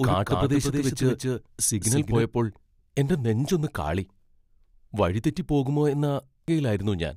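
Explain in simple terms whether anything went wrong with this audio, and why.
Two things go wrong here. From the very start until 2.22 s there's a doubled audio track: a second, somewhat quieter copy of the speech trails about a fifth of a second behind, with no room echo to it, and then drops out abruptly. That's likely the same audio being captured twice, once through a slower path. Then at 6.48 s you get a brief glitch. That's damaged data in a compressed stream: the decoder hit a bad patch in the file and had to search for where it could pick up the stream again.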